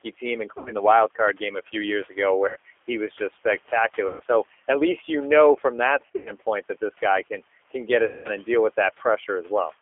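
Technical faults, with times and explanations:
Throughout, G.729 codec: the speech runs at 8 kbit/s within a 300 Hz to 3.4 kHz line band. Each 10 ms frame is rebuilt from a vocal tract filter, a pitch predictor and a few pulses. The voice sounds rough and synthetic, and the room noise, about 23 dB below it, warbles.
0.58–0.73 s, 2.48–2.57 s, 4.08–4.23 s, 6.06–6.33 s and 8.05–8.28 s, VoIP packet loss concealed by the speech codec: 80 to 200 ms of audio goes missing each time, scattered around 6.1 s. The decoder stretches its last pitch and filter into a buzzy tone or coloured noise that fades. The voice stays weak for a moment after each gap.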